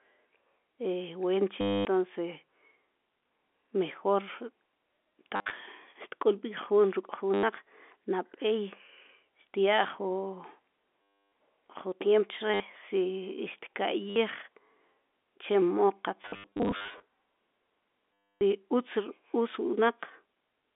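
Packet loss with last packet repeated occurs at 1.61, 5.36, 7.34, 11.23, 12.54, 14.1, 16.22 and 18.15 s. Each time, lost packets are replaced by repeats of the last good one, which gives a robotic stutter buzzing near 100 Hz, consistent with 10 ms packets. The longest stretch runs from 16.22 to 17.02 s, through the G.711 telephone band.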